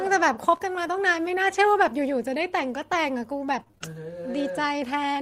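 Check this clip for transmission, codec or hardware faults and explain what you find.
Three transmission faults can be heard in this speech, all of them packet-loss effects.

Lost packet rebuilt from error correction, 0.53 to 0.55 s: a brief rough, grainy patch with no break in the sound, lasting about 20 ms. This fits one lost packet whose content was carried as a low-bitrate copy inside the next packet. The decoder played that copy, so nothing drops out, but this stretch of speech is coarser and noisier than what surrounds it.

Short concealed packet loss, 0.57 to 0.61 s: a small smear or wobble directly after the rough patch. About 20 ms of audio never arrived in time. The receiver covered roughly 18 ms of it by extending the preceding sound, following its pitch where the speech was voiced and using shaped noise where it wasn't, then crossfaded back into the real signal. Any brief consonant in that span may be lost.

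Repeated packet loss (robotic sound), 3.51 to 3.95 s: choppy speech with small pieces missing. Five separate gaps fall in this stretch, the longest 27 ms, together about 100 ms of lost audio. About 89 ms of that was papered over by continuing the last sound, so roughly 27 percent of the span is synthetic. Some of the lost audio appears to have come back from error-correction copies. Because the losses follow each other so closely, the repeated patching gives the speech its mechanical, robotic quality.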